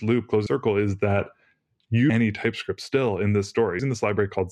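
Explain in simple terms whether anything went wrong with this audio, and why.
Something did go wrong. The audio suddenly jumps forward three times, at 0.46 s (just before "is that"), at 2.10 s and at 3.79 s. This is called compressed frames skipped. The file stores sound in small 32 ms blocks, and some blocks were missing or too damaged to play. So sound is lost: about a fifth of a second, then about a whole second, then about a third.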